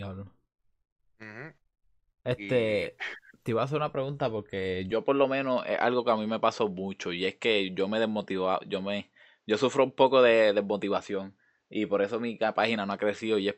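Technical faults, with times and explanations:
4.92–13.57 s, input switched to a poorer device: the speech suddenly dulls without a gap, losing everything above 8 kHz and gaining faint new background noise, likely from a narrower-band microphone taking over.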